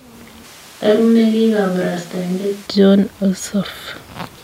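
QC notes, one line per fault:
0.45–2.66 s, switch to a distant microphone: close mic likely dropped, farther mic takes over; speech turns abruptly hollow, roomy, thinner, about 10 dB quieter, noisier.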